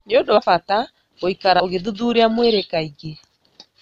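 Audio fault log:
0.37 s and 1.60 s, compressed frames skipped: whole blocks of encoded audio never reach the output, most likely because they were missing from the stream or rejected as corrupt by the decoder. At 0.37 s about 100 ms of speech vanishes, roughly four frames of 26.1 ms; at 1.60 s about 70 ms, roughly three frames. Each join is a short smeared blip rather than a sharp click, since neighbouring frames overlap and blend across the gap.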